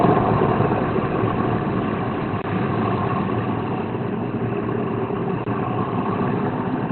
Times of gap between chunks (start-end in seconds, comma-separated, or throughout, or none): 5.44-5.46